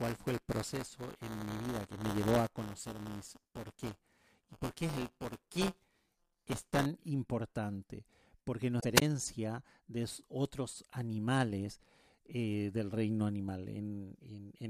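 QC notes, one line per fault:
0.0 to 6.86 s, buffer tearing: there's a steady robotic buzz at about 172 Hz under the speech until just before "importante porque". The writer and reader of the ring buffer have slipped, so a small slice of each period, roughly 7%, replays audio from about 10 ms earlier. The 172 Hz rate fits a 256-sample buffer.
8.77 to 8.85 s, damaged data in a compressed stream: right after "importante porque" you get a short glitch. A bad patch in the compressed data threw the decoder off, so it mangled those frames and lost sync until it found the next clean frame header.
8.95 to 9.02 s, wireless microphone squelch dropout: a quick burst of hiss and then a hole of near silence lasting about 17 ms before the audio comes back. The radio link from the FM mic faded far enough that the receiver's squelch muted the output for a moment.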